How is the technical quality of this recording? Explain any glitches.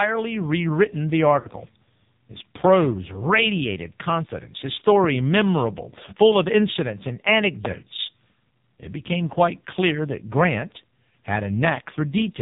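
The technical quality is poor. The whole recording has passed through an AMR narrowband mobile codec with heavy damage. The speech is band-limited to 4 kHz. It sounds buzzy and synthetic, which fits one of the lowest modes, around 5.9 kbps. Few pulses model each short stretch of the voice.

At 1.40 to 1.48 s, just after "rewritten the", there are lost AMR speech frames. About 40 ms went missing. The decoder repeated the last good pitch and vocal tract settings at falling level. You hear a brief smeared, fading warble before the voice returns rough.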